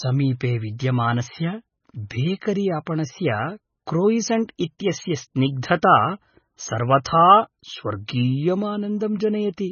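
From start to finish the speech carries heavy damage consistent with MP3 compression, likely from an encoder starved of bits, with the sound pointing to a very low rate of roughly 16.8 kbps. Everything above 6.6 kHz is gone, so s sounds lose their hiss and turn dull and lispy, while weaker detail swirls and warbles as it drops in and out. A spectrogram shows a hard flat ceiling at 6.6 kHz and a blotchy, flickering pattern of gaps below it.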